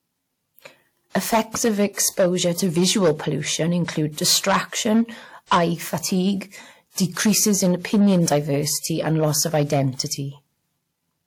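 Hard clipping runs through the whole speech clip: driven about 14 dB past the limit, roughly three percent of samples have their peaks cut flat, adding high harmonics heard as fuzz on loud sounds.

Pre-echo appears at 1.93 to 1.97 s, 4.12 to 4.17 s and 5.46 to 5.51 s, spreading 41, 58 and 50 ms: codec noise from each block leaks ahead of attacks as brief hiss, softening them.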